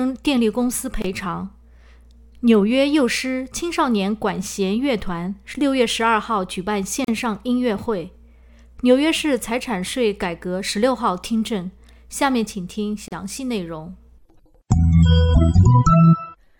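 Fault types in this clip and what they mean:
Gap at a join of encoded pieces: separately encoded segments were butted together untrimmed, so encoder start delay and last-frame padding survive as short silences. Here, roughly 24 to 37 ms dropouts with smeared edges recur every 6.0 s, sound resuming where it stopped.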